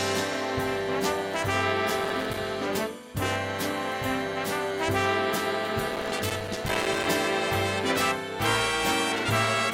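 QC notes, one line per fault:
1.99–2.38 s: processor overload crackle. The processor keeps missing its deadlines, and each missed buffer plays as a short hole of silence with hard edges. Dozens of gaps in quick succession turn into a gritty crackle over the sound. The spacing points to buffers of about 3 ms.
5.91–7.06 s: processor overload crackle again. The same run of silent dropouts lasts over a second, so the tearing is longer. It stops when the load clears.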